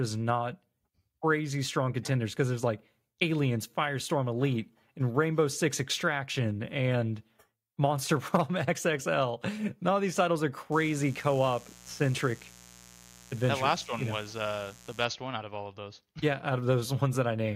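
Mains buzz runs from 10.72 to 15.05 s: switching spikes twice per 60 Hz cycle leak in, giving a steady, raspy buzz well below the speech.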